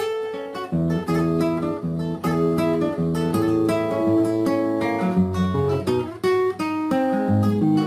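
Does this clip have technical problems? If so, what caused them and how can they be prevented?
No, there are no technical problems to report in this clip. With nothing going wrong, there is no cause to trace and nothing that needs preventing.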